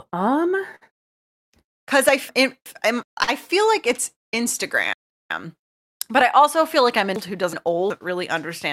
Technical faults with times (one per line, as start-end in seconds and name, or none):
0.75-0.83 short stall from a late packet
2.29-3.03 chunks out of order
3.23-3.30 short stall from a late packet
4.93-5.67 chunks out of order
7.16-7.90 chunks out of order